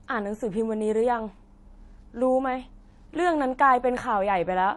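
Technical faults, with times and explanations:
Throughout, transcoding between lossy codecs: the speech has nothing above 11.4 kHz, and two kinds of coding artefacts are heard at once. This is likely a low-bitrate MP3 re-encoded as HE-AAC, so the second encoder spends bits reproducing the first encoder's damage. A spectrogram shows a hard ceiling at 11.4 kHz with patchy upper bands.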